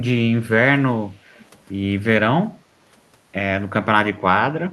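Speech with an echo leak at 1.34–1.58 s: a faint delayed copy, roughly 30 dB down and 417 ms late, likely slipped past the far end's echo canceller.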